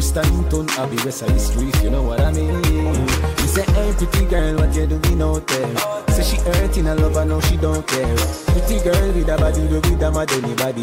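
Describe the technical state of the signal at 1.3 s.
At 1.3 s the signal is intact, with no dropout, distortion or other fault audible at that moment.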